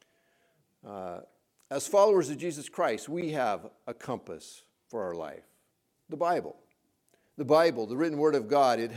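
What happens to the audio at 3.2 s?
At 3.21 s a gap at a join of encoded pieces opens a 9.5 ms gap: two separately encoded segments were butted together with encoder delay and end padding left in. Unlike a dropout, nothing is lost; the sound resumes exactly where it stopped, with smeared edges.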